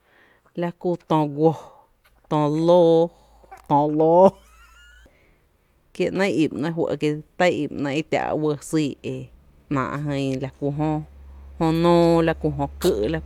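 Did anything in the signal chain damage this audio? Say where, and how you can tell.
No, nothing in the signal chain damaged this audio.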